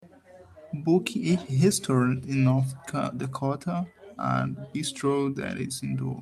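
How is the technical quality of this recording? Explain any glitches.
No glitches to explain; nothing in the speech registers as a technical fault.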